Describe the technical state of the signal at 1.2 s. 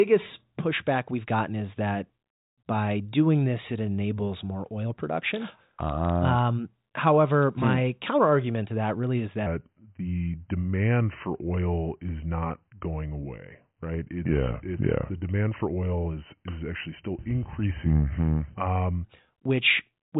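At 1.2 s the speech is intact, carried through a telephone-band G.726 ADPCM path whose content stops at 4 kHz and whose faint coding noise fits the 40 kbit/s rate.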